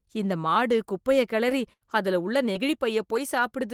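From 1.49 to 3.41 s, after "இந்த மாடு குப்பையக்", scattered short gaps: about three lost packets, each patched by stretching the preceding sound into brief ticks and smears, not one continuous dropout.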